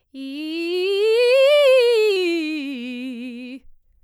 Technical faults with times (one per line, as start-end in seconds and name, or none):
2.16-4.04 drift correction step